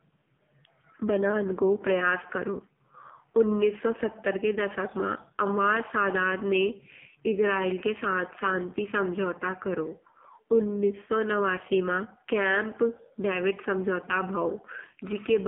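Throughout, the speech carries AMR narrowband mobile codec damage. It is held to about 200 Hz–3.5 kHz with nothing above 3.7 kHz, and heavily buzzy and synthetic, which fits a low mode around 5.9 kbps. That buzz separates it from a plain telephone band-limit filter.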